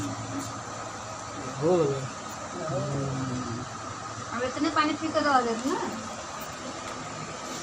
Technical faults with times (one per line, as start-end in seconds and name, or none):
0.00-7.62 MP2 compression
0.85-1.05 DAB burbling
2.95-3.15 DAB burbling
6.84-7.11 DAB burbling